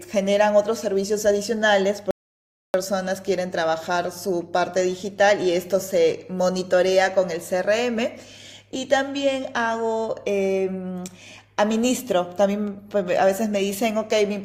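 From 2.11 s to 2.74 s there is an audio dropout to silence. The input feed was most likely interrupted, by a lost connection, a device dropping out or a momentary mute, while the recorder kept writing silence. The speech stops abruptly mid-flow and resumes just as suddenly about 0.63 s later. The gap is dead silence with no room tone at all, and whatever was spoken during it is lost.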